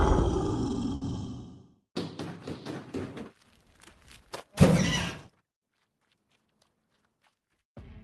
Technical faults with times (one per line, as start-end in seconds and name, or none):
0.95-1.03 short stall from a late packet
6.35-6.74 jitter buffer speed-up